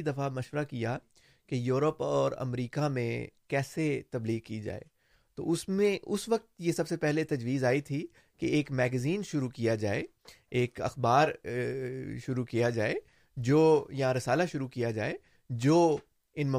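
No technical faults can be heard anywhere in this speech recording. There is nothing in it that needs a time marker or an explanation.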